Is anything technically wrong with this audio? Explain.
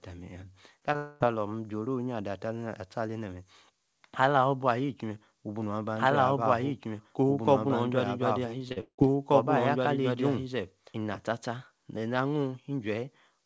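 Yes, there are several faults.

Short concealed packet loss, 0.80–0.83 s and 0.93–0.96 s: two brief runs of packets arrived too late to decode, and the receiver bridged each 20 ms hole by extending the preceding sound, so each moment comes across as a quick smear or wobble.

Long network dropout, 0.96–1.25 s: audio likely stopped arriving for about a quarter of a second right after the second short loss. The receiver stretched the last sound into a fading buzz, and the speech resumes with that stretch gone.

Doubled audio track, 5.95–11.15 s: a second copy of the speech, likely from a duplicate capture or edit, runs roughly two seconds behind the original at about the same level. It has no room colour, overlaps the live speech, and switches on and off abruptly.

Repeated packet loss (robotic sound), 8.59–9.03 s: packets kept going missing in five gaps, the longest about 175 ms. Each gap was patched by continuing the previous sound, so more than half of this stretch is filled-in, choppy speech with pieces missing.

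Throughout, the call path's G.722 coding leaves nothing above 8 kHz.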